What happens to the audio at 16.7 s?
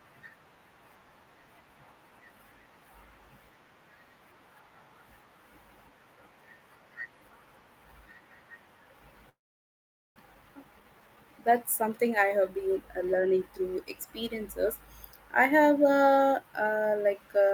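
Nothing goes wrong at 16.7 s; the speech carries on intact through that moment.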